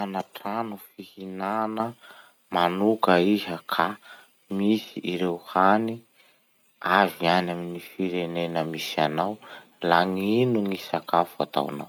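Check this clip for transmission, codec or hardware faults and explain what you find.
One fault is present: a microphone volume stepped up at 1.8 s. The input level rises abruptly by about 7 dB, with the speech and the background noise jumping together. The calling software judged the microphone too quiet and raised the device's input gain in a single step rather than gradually. On a waveform the envelope widens suddenly at that point, and a spectrogram shows every band, the noise floor included, brightening at once.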